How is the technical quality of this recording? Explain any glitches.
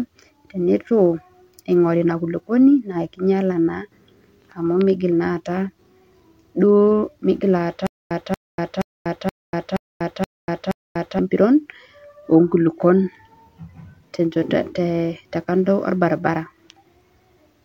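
The recording has one clear glitch, a stutter with silent gaps from 7.87 to 11.19 s. The stream likely stalled and kept replaying a 234 ms fragment seven times, each followed by 241 ms of dead silence, so the audio loses its original content there.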